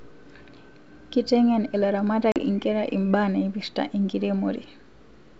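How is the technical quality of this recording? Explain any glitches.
There is a single glitch in the speech, carried over G.722 wideband coding at 64 kbit/s. At 2.32 to 2.38 s, a hard-edged 40 ms hole cuts in before the sound returns briefly slightly distorted. This is packet loss on an ADPCM call: a couple of packets were replaced by silence, and the decoder's predictor and step size needed tens of milliseconds to resynchronise.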